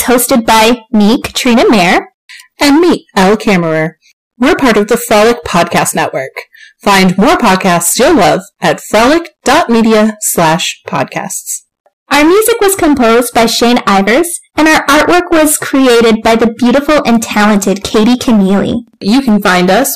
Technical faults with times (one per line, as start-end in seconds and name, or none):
0.00-19.95 hard clipping